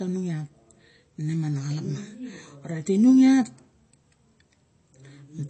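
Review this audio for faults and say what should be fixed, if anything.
MP3 compression, throughout: nothing above 8.3 kHz and plainly audible artefacts, likely from an encoder starved of bits (fits about 32 kbps) discarding treble and weak components. Prevent this by encoding at a higher bitrate or keeping a lossless copy.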